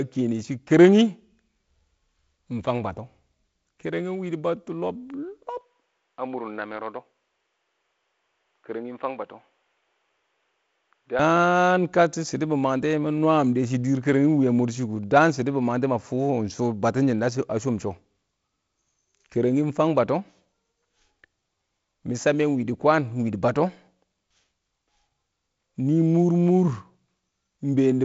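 A recorded speech clip in which the system likely switched its input to a poorer device between 5.61 s and 11.19 s, with no silence at either changeover. Across that stretch the sound turns dull and boxy, with nothing above 3.8 kHz. The level drops by about 5 dB and a faint new background noise appears, well below the speech. After the switch back, the wider band returns, reaching about 7.7 kHz through the G.722 wideband coding.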